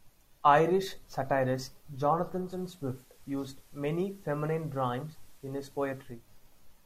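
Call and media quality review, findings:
Digital radio blending to analogue, 2.38 to 6.29 s. Hybrid receiver lost the digital stream and cross-faded over about 230 ms to FM of the same station, then back. Faint hiss appears, level down about 2 dB.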